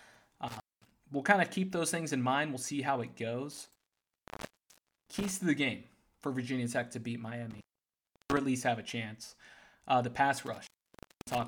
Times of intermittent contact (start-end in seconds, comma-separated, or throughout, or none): 0.48-0.92, 3.51-5.31, 7.51-8.37, 10.46-11.44